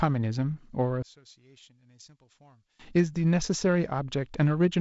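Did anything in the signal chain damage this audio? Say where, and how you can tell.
Yes. One channel inverted, from 1.03 to 2.79 s: the speech abruptly drops by about 26 dB and comes back as a faint copy, then returns to full level. That is what happens when one stereo leg has its polarity flipped and the pair is summed to mono. The centred voice, common to both channels, cancels and leaves only the small difference between them. The likely stage is analogue wiring, such as a miswired balanced lead, ahead of a mono fold-down.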